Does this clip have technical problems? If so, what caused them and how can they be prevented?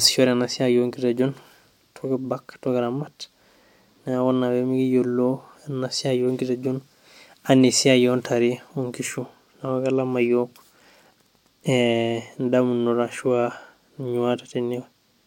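No, nothing in this speech clip stands out as a technical problem, so there's nothing to trace back or guard against here.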